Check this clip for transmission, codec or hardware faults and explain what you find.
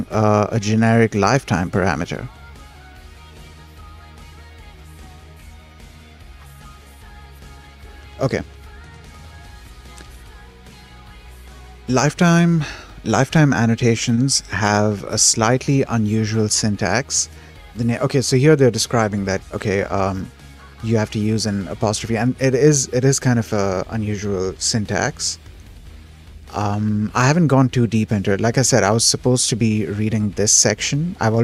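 There's short concealed packet loss in two spots, at 14.15 to 14.19 s and 28.33 to 28.37 s. Each time about 20 ms of audio didn't reach the decoder in time, so the receiver extended what it had last played, carrying on the pitch or filling with shaped noise, and then crossfaded back into the real signal. You hear a quick smear or wobble there, and a very short sound can simply drop out.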